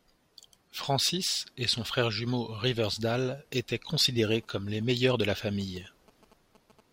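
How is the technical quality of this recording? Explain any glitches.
The recording is marred by one interference fault near the end. From 4.35 to 6.81 s, a galloping dit-dit-dit of short 217 Hz buzzes sits well below the speech: GSM signalling bursts, rectified by the audio circuitry from a nearby 2G phone.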